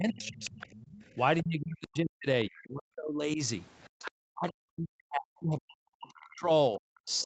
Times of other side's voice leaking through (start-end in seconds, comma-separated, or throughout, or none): 0.10-0.97, 1.38-1.42, 2.44-2.58, 3.84-4.05